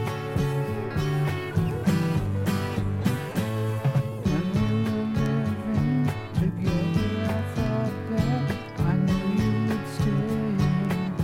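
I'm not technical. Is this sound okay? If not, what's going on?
Yes, from a technical standpoint the recording holds together without any audible problems in the signal itself.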